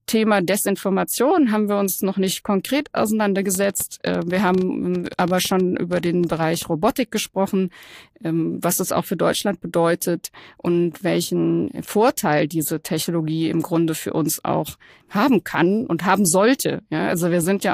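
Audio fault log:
3.55–6.63 s train of clicks: about thirty clicks at 10.1 per second, unevenly spaced, poking above the speech. They show as sharp waveform spikes and thin vertical spectrogram lines, likely from interference.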